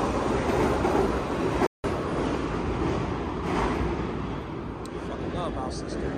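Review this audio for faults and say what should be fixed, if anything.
A playback stall cuts the sound from 1.66 s to 1.84 s. The output goes silent for 172 ms, then carries on. The likely cause is the player running out of buffered data, or its audio thread being blocked for that moment. A larger playback buffer, fed ahead of time by a high-priority audio thread that never waits on disk, network or locks, would prevent it.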